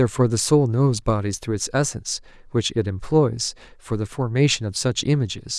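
Nothing stood out on listening to this speech recording.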